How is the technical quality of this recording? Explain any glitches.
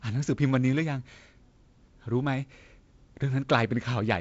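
No glitches or technical faults can be heard in the recording. It has gone through G.722 wideband telephone coding at 48 kbit/s, so the speech reaches up to about 7.7 kHz with nothing above, and the reduced bitrate leaves a light layer of coding noise in the sound.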